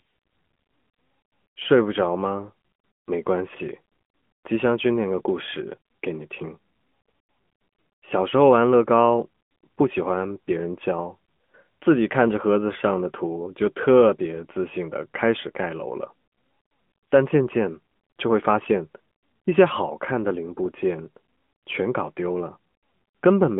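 From start to finish the speech carries AMR narrowband mobile codec damage. Nothing passes above 3.4 kHz. The buzzy, synthetic tone fits a mid-rate mode near 10 kbps.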